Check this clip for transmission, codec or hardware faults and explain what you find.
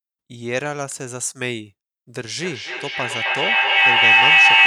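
One fault is present in this speech. Feedback howl runs from 2.37 s to the end at 4.67 s. Two devices in one room share the call, so each pass through loudspeaker and microphone adds gain. Instead of fading, the repeats, roughly 0.3 s apart, build to a tone around 3 kHz that peaks about 13 dB above the speech.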